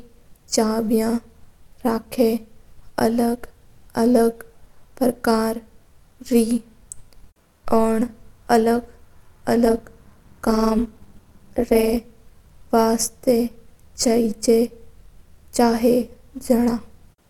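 Overlap-add ripple runs from 9.65 to 11.97 s. The speech was split into windowed frames and rejoined with an overlap whose gains don't sum evenly, so the level dips by about 11 dB once per frame, giving a metallic buzz at around 200 Hz with extra tones around each note.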